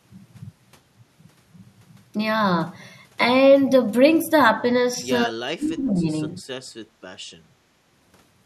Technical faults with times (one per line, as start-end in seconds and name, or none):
5.26-6.08 speech suppressed in double talk
6.85-6.96 background gated by the echo canceller